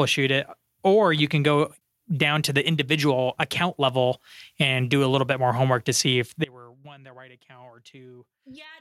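An audio dropout to a faint residue starts at 6.45 s, just after "homework to see if", and lasts to the end. The speech cuts off abruptly, leaving a faint trace roughly 25 dB down, likely because the source broke while the path stayed live.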